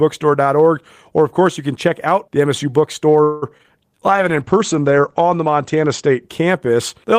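Call audio freeze, 3.23 to 3.44 s: the last sound stretches into a fading buzz or hiss for about 0.19 s, then the speech resumes exactly where it stopped, with nothing lost. This likely reflects delayed packets draining the jitter buffer, and it leaves the rest of the call running 186 ms later.

Short concealed packet loss, 3.58 to 3.61 s and 3.63 to 3.66 s: each is a brief smear or wobble. Audio failed to reach the decoder in time, and the receiver patched each gap by extending the preceding sound before blending back, dropping about 20 ms of real audio per event.

Call bitrate drop, 4.12 to 6.58 s: the speech turns rough and muffled. A falling bandwidth estimate pushed the Opus encoder from 32 kbps down to 12 kbps, where it held for about 1.4 s. The coarser coding also narrowed the audio band from 20 kHz to 8 kHz before quality recovered.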